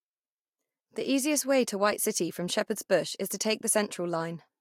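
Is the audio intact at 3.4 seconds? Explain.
Yes, at 3.4 seconds the speech plays through cleanly, with no audible dropout, click, distortion or other fault.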